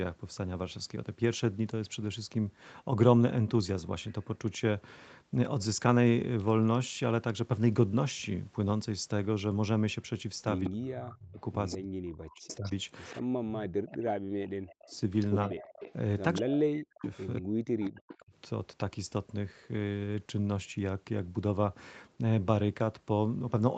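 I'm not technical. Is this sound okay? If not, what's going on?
No. An echo leak likely let the far end's loudspeaker sound back into the call. A faint copy of the voice, about 0.2 seconds late, is heard briefly at 10.64 to 10.70 and again from 11.7 to 17.89 seconds.

Speech suppressed in double talk is also likely: both sides talked at once and the echo canceller turned the voice down. Between 10.66 and 18.33 seconds it dips and drops almost to silence, for about five seconds in total.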